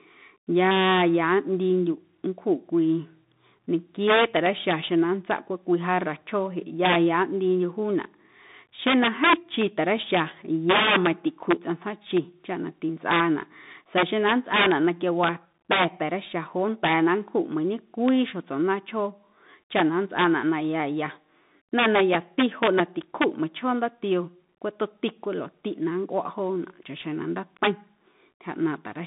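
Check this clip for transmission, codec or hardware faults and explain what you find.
One fault runs through the whole clip: the Bluetooth CVSD headset codec. The speech sounds boxed-in and thin, confined to roughly 150 Hz to 3.7 kHz with nothing above 3.8 kHz. S sounds turn scratchy over a granular hiss. CVSD sends one up-or-down bit per sample, which fits a 64 kbps stream, and its adaptive step can't keep pace with loud high-frequency sounds.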